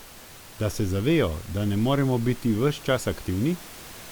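No technical faults are audible in the speech, and the room noise sits about 20 dB below it as part of the recording.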